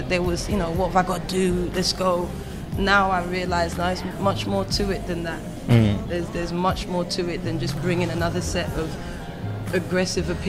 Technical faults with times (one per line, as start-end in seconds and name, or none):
none